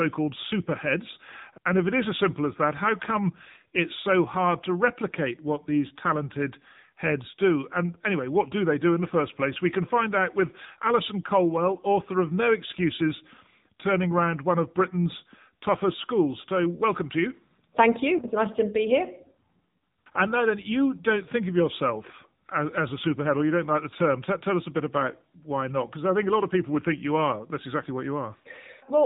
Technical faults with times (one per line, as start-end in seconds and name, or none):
0.00-29.06 AMR narrowband mobile codec